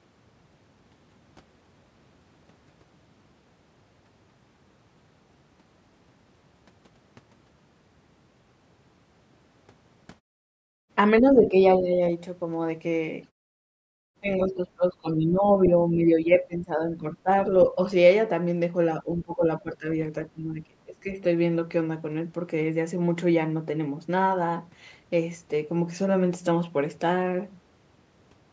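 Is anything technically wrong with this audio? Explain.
Yes. There are two faults.

Speech suppressed in double talk occurs at 11.21–11.98 s, 14.2–17.29 s, 17.72–17.79 s, 19.03–19.86 s and 20.33–21.16 s. The speech dips by roughly 10 to 25 dB, deepest near 21 s. Both sides were likely talking at once. The echo canceller couldn't separate them, so it turned everything down.

The other side's voice leaks through briefly at 15.65–15.70 s. It is a short scrap about 15 dB below the main speech. The far end likely played on a loudspeaker, and the echo canceller didn't fully remove it from the microphone.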